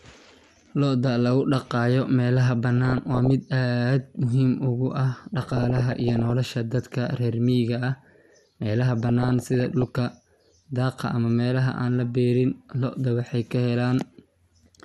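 From start to finish the speech has a dull, granular quality with a plainly audible gurgle, consistent with MP2 compression at a low rate, likely around 80 kbps, where too few bits force upper sub-bands off and leave the remaining bands coarsely quantised.

DAB burbling then appears from 2.77 to 3.30 s, 5.34 to 6.31 s and 9.00 to 9.99 s: short blips of noise over the speech as bit errors, roughly 0.5 to 0.7 percent of bits, corrupt samples and scale factors, making individual sub-bands jump in level.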